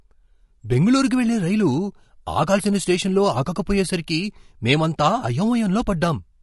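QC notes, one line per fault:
Throughout, low-delay AAC compression: the speech sounds rough and grainy, with a hiss-like fill between the pitch harmonics and a dulled, somewhat synthetic top band. The likely cause is a low-delay codec such as AAC-ELD, whose short frames of about 500 frequency lines resolve the harmonic structure of the voice poorly and spend bits inefficiently. At a rate that fits roughly 32 kbps, the damage is plainly audible across the whole clip.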